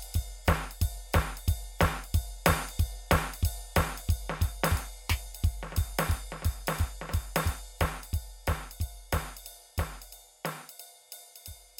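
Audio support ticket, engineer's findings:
No fault found on listening to the music clip. Nothing to trace to any component in the chain.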